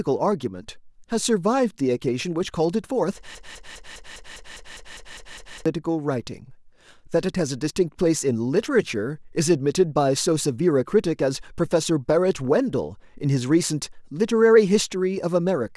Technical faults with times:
3.35-5.66 broken-record loop

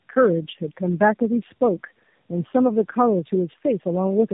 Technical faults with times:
0.00-4.33 tandem speech coding

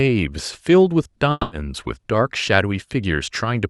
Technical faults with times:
1.31-1.53 long network dropout

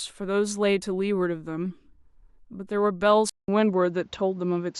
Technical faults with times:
3.29-4.79 input switched to a poorer device

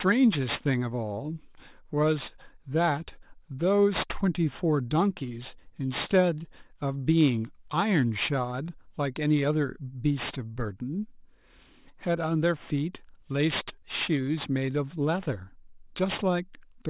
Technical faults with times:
0.00-16.89 aliasing

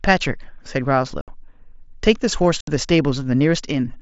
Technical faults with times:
1.21-1.28 unconcealed Bluetooth headset packet loss
2.61-2.68 unconcealed Bluetooth headset packet loss

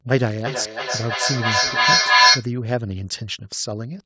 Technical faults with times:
0.46-2.54 feedback echo between two devices

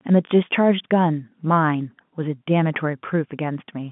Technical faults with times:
none

